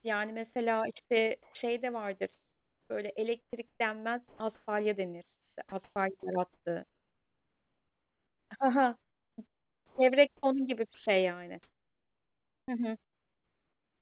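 From 1.43 s to the end of the clip, the speech is chopped by the voice detector: quiet syllables and word edges drop out and are replaced by a hiss-like fill, about 6.4 s of it in total. This makes the speech choppy. The likely cause is the sender's voice activity detection repeatedly switching transmission off and substituting comfort noise. The call path's band limit at 4 kHz, consistent with G.711, is audible throughout.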